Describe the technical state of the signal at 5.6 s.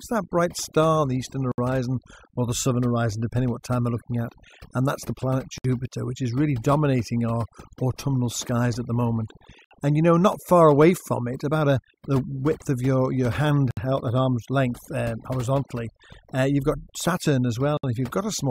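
A gap at a join of encoded pieces opens from 5.58 to 5.64 s, right after "that's the planet" and before "which is really dominating". Separately encoded segments were spliced untrimmed, so leftover start delay and end padding leave about 64 ms of silence with smeared edges, repeating every 4 s.

Overdone noise removal is also present at this moment, as throughout. Bands near the estimated noise floor are pushed nearly to silence, taking quiet parts of the voice with them, so the background drops and breaks up into twinkling specks.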